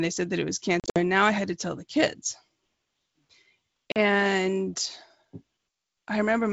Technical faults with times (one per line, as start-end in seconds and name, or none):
0.80-1.00 packet loss on an ADPCM call
3.92-3.98 packet loss on an ADPCM call